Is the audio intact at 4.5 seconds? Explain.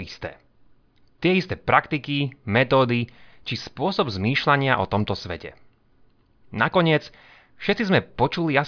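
Yes, the speech at 4.5 seconds is intact, with no dropout, click, distortion or other fault audible at that moment.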